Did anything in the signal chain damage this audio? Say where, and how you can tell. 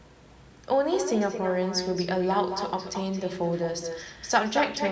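Yes. Echo with no canceller runs through the whole clip: every phrase is trailed, about a fifth of a second later, by a thinner copy about 8 dB down. The far end's loudspeaker feeds its microphone, and with nothing cancelling it, the sound returns over the network round trip.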